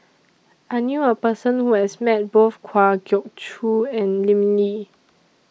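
From 2.75 to 3.53 s the speech slows by 5.2% and drops in pitch by 93 cents, close to a semitone, then snaps back. This drift correction step is likely from clock-matching software lowering the playback rate in one jump to refill its buffer.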